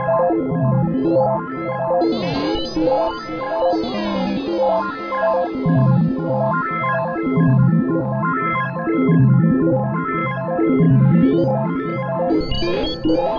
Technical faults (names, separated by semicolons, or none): none